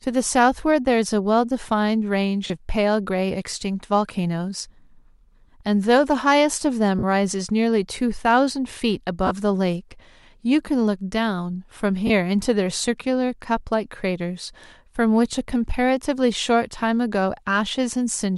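Lost LE Audio frames at 2.47–2.50 s, 6.99–7.04 s, 9.27–9.31 s and 12.07–12.10 s: dropouts of 30–40 ms, consistent with three or four 10 ms frames, were concealed by repeating the previous spectrum, briefly smearing the speech into noise.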